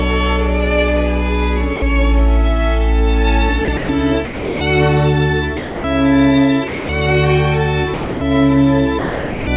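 The sender's voice detector likely misjudged parts of the sound as background and stopped transmitting, so the receiver filled the gaps with comfort noise. This sound dropped by the voice detector happens eight times: 1.76–1.82, 3.65–3.68, 3.77–3.89, 4.25–4.61, 5.57–5.84, 6.68–6.89, 7.94–8.21 and 8.99–9.47 s. Each time the sound gives way to flat, steady noise for 30 to 480 ms, then returns. All of it arrives band-limited, with nothing above 4 kHz.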